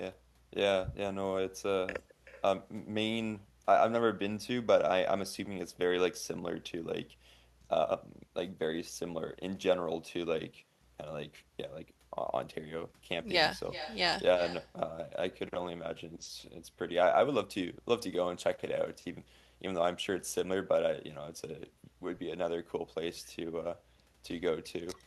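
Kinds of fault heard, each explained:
Echo with no canceller: present throughout the speech, every phrase is followed after roughly 400 ms by a fainter repeat sitting about 14 dB below it. The far end is playing the call through a loudspeaker, and its microphone captures that playback and sends it straight back, with no echo cancellation to strip it out. After the network round trip, the returned copy arrives thinner and trails each phrase.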